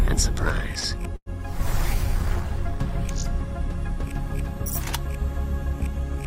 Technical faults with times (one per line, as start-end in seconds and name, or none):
0.79-0.87 short stall from a late packet
1.16-1.29 call audio freeze